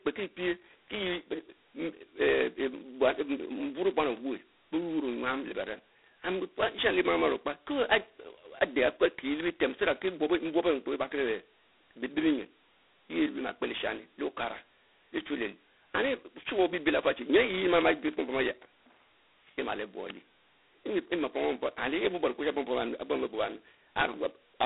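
It's a speech clip, and the whole thing has been through G.726 ADPCM coding, heavily. The band runs from about 250 Hz to 3.6 kHz, with nothing at all above 3.8 kHz, so it sounds thin and boxed-in. The bigger giveaway is that harsh, rasping hiss riding on the speech and rising and falling with its level. That's quantisation noise from coding each sample as just a couple of bits of difference from a prediction, which fits the 16 kbit/s mode.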